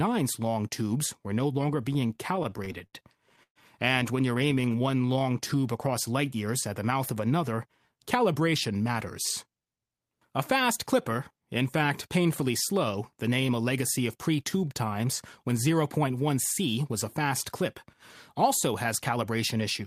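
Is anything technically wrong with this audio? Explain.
Yes. The speech shows network playout problems of three kinds.

From 1.93 to 3.59 s, just after "tubes were no longer", there are repeated stalls (stutter). Packets reached the receiver late, so its jitter buffer ran dry 15 times. Each time, the receiver stretched the last sound to cover the wait, filling 362 ms in total, with the longest single wait at 125 ms. Concealment covers about 22% of that span, yet nothing is actually lost. The result sounds like a catching, jerky drag. The tell is irregular freezes and restarts rather than a steady change of pace.

From 4.38 to 5.56 s, between "when you're" and "across light years at", there is a jitter buffer slow-down. With its reserve low, the receiver repeated single pitch periods and snippets of pauses to build up a cushion, adding 125 ms. Playback runs at 90% speed with the pitch unchanged, so the speech sounds drawn out. 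Unlike the stalls, the flow never halts. It simply stretches evenly.

At 7.53 to 8.89 s, and again from 18.87 to 19.85 s after "a fast clip also", there is a jitter buffer speed-up. The buffer held more audio than its target, so the receiver cut out short pitch-period pieces, roughly 100 ms in the first stretch and about 70 ms in the second. The speech runs at 106% and sounds hurried. The pitch stays the same, which is what separates this from a simple resampling or pitch-shift error.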